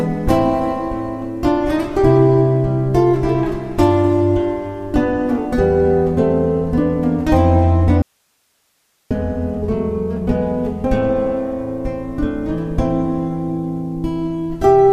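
At 8.02 s the sound cuts out abruptly, mid-flow, and for about 1.09 s, until 9.11 s, only a faint hiss remains, roughly 45 dB below the normal level, before the audio snaps back just as suddenly. This is an audio dropout to a faint residue: the wanted signal was most likely lost upstream for that stretch while the path after the break stayed live, so its own noise floor carried through the gap instead of true silence.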